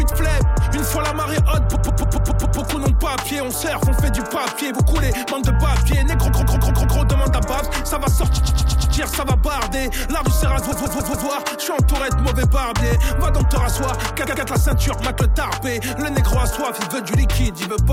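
Repeated frames at 1.74–2.58 s, 6.27–6.97 s, 8.36–8.94 s, 10.71–11.26 s and 14.26–14.45 s: a block of compressed audio 93 to 139 ms long plays again two to six times in a row. Each run is a rapid stutter, and each adds 0.19 to 0.84 s to the running time.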